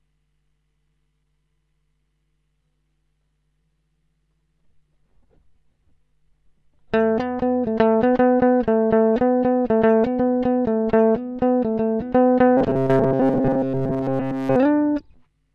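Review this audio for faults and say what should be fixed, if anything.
Robotic sound from repeated short buffers runs from 12.57 to 14.56 s. Most of that stretch turns into a rigid metallic buzz near 133 Hz that only loosely tracks the sound, likely because playback kept looping a last chunk of about 7.5 ms while fresh audio arrived too late. To prevent it, give the playback path a larger jitter buffer and make sure the audio thread is scheduled reliably.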